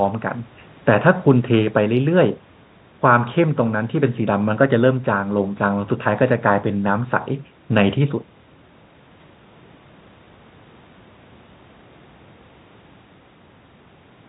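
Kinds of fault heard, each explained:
No fault is present in this speech: the band stops at 4 kHz, as expected for narrowband call audio such as a G.711 mu-law link, and the call microphone's high-pass filter trims only the lowest bass.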